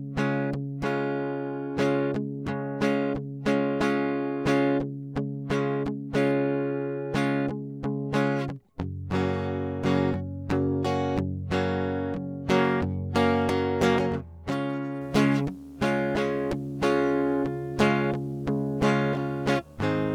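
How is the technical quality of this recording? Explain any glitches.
From 15.01 s to the end of the music at 20.1 s, a video or display buzz sits under the mix. A screen or video cable is coupling into the audio path, and its field rate of 75 Hz comes through as a steady low buzz with hash above it. The interference sits roughly 25 dB below the music, and once it starts it stays in place for the final five seconds.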